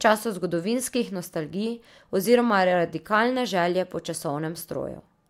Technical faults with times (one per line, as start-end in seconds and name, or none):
none